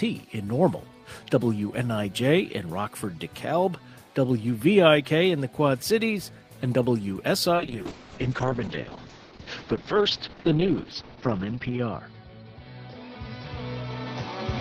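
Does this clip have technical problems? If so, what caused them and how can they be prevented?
Yes. At 7.56 s the call's bandwidth estimate collapses and the encoder is starved of bits, a call bitrate drop consistent with a fall from around 40 kbps to 7 kbps. Coding coarsens and the top end narrows from 20 kHz to 6 kHz, leaving the sound muffled and rough through the end, worst for about 4.2 s. Prevention: give the call a stable, uncongested connection or prioritise its traffic, and set a higher minimum encoder bitrate.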